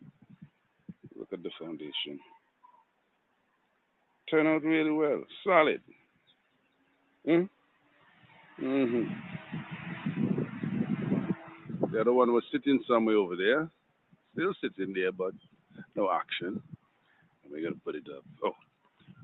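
Across the whole clip the level pumps and flutters: sharp onsets mostly push through while anything held or decaying sinks back, with the gap between kept and suppressed sound swinging by something like 20 dB. This is a noise suppressor applied to music or sounds. A suppressor tuned for speech is treating steady tones, ambience and reverb tails as background noise and pulling them down, so the sound keeps thinning out between attacks. The top end stops at 8 kHz throughout, which is just the bandwidth of the call path.

The heaviest dips are sounds cut by the noise suppressor, each dropping by about 14 dB: from 0.11 to 1.07 s, from 2.36 to 4.27 s, from 5.82 to 8.58 s, from 13.69 to 14.37 s (about 15 dB here), from 15.32 to 15.96 s, from 16.62 to 17.47 s, and from 18.21 s to the end at 19.23 s. In each stretch, sustained or fading material is judged to be noise, so it sags or its decay is clipped short while transients survive.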